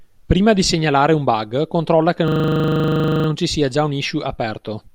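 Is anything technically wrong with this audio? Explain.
Yes. A system hang loop runs from 2.28 to 3.28 s, after "un bug controlla che" and before "ci sia già un". Playback froze while the hardware kept cycling one 40 ms buffer, so that slice repeats exactly, sounding like a steady 25 Hz buzz.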